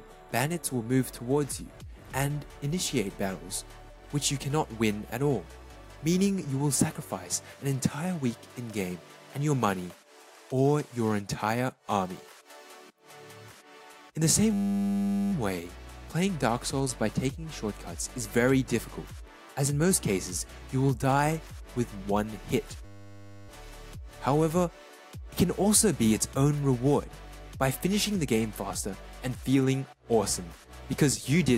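A system hang loop occurs from 14.53 to 15.32 s and again from 22.85 to 23.49 s. Each time, the computer or driver stalled while the sound hardware kept replaying the same 10 ms stretch of its ring buffer. It cycled 79 times in the first event and 64 in the second. Because the loop is so short, it repeats 100 times a second and is heard as a steady, flat 100 Hz buzz. Almost no audio goes missing when playback resumes.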